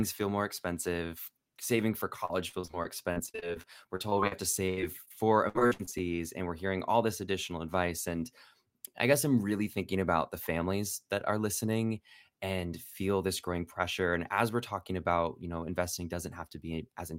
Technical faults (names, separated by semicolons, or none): repeated packet loss (robotic sound)